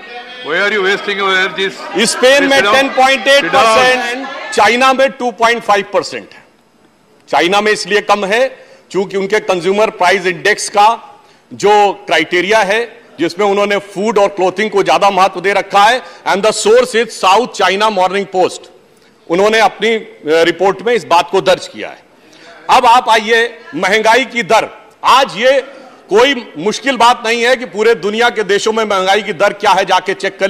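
No technical faults can be heard anywhere in the recording, and the signal holds steady throughout.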